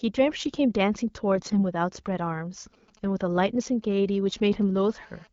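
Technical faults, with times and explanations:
1.36 to 1.63 s, AMR bit errors: for about 0.28 s the speech turns hoarse, scratchy and gargly while keeping roughly its pitch and loudness. Over a weak radio link, perhaps one bit in ten of the lightly protected frame data arrived flipped, so the decoder placed its excitation pulses wrongly and rebuilt wrong pitch, gain and spectral detail. Unlike a dropout or concealed packet loss, the sound never goes silent or smeared. It stays present but corrupted.
2.74 to 4.78 s, GSM signalling bursts: a galloping dit-dit-dit of brief 217 Hz buzz fragments sits about 30 dB below the speech. A nearby 2G phone is sending short groups of radio bursts while it exchanges signalling with the network, and the audio circuitry rectifies them into audible pulses. It differs from the steady buzz that follows because the interference arrives in irregular clusters with gaps, not as a continuous tone.
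4.78 to 5.27 s, GSM phone buzz: the pattern becomes a hard, raspy, continuous buzz at 217 Hz, rich in harmonics and about 32 dB below the speech. The same phone now transmits a burst in its time slot of every frame, 217 times a second, as in an active call. The rectified radio pulses form an unbroken tone unrelated to the speech. Unlike mains hum, it is far harsher and sits at 217 Hz rather than 50 or 60 Hz. The underlying AMR wideband (HD Voice) coding shows only light damage, consistent with a mid rate.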